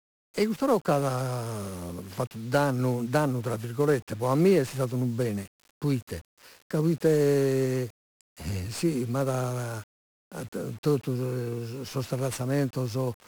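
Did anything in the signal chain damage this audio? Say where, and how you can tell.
Yes. The speech is fuzzy and crackly from start to finish, with hiss burying the treble: heavy 1-bit DFPWM compression at the codec stage. Each sample keeps a single bit nudging an adaptive level up or down, which fits a stream around 48 kbps and leaves dense broadband quantisation noise.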